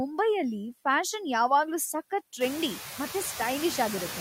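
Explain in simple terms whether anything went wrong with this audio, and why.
Noise suppressor artifacts run through the whole clip. The suppressor turns down the background noise frame by frame, but only lightly, so the noise dips in the pauses and returns under the speech. This is clearest after about 2.5 seconds, where the room noise gets louder.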